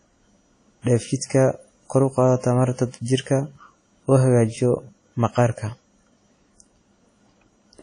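Right from the start the speech has that ringing, washy quality with a hiss that swells and fades along with the voice, and nothing comes through above about 10.1 kHz. That's WMA compression, likely at a low bitrate around 32 kbps, with weak detail simply zeroed out.

At 0.82 to 0.87 s there's pre-echo: a short hiss creeps in roughly 43 ms ahead of a sharp attack, which then lands soft and smeared. The codec spread the noise meant for the loud onset across the quiet moment just before it.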